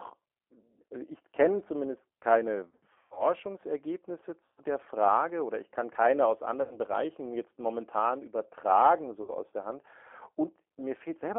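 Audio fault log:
throughout G.729 codec. The speech is held to about 300 Hz to 3.4 kHz. Each 10 ms frame is rebuilt from a filter, a pitch guess and a few pulses. The result sounds plainly rough and synthetic. This points to an 8 kbit/s G.729A link.
2.69–3.24 s, 4.45–4.60 s, 6.62–6.79 s, 9.22–9.31 s VoIP packet loss concealed by the speech codec. The first comes after "ich kenne zumindest keine" and loses 270 ms over 480 ms. Others follow "ich kann keine aus" and "jetzt momentan übertragen". The decoder stretches its last pitch and filter into a fading buzz or coloured noise.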